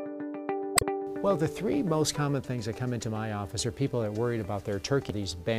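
At 0.75 s there's a quick glitch lasting about 80 ms, and another at 5.07 s, shorter at around 44 ms. Both are damaged data in the compressed stream. Some bytes in those stretches got lost or garbled, so the decoder misread the frames, lost its place and had to hunt for the next valid frame header before playback could pick up again. That hunting is what produces the brief glitch.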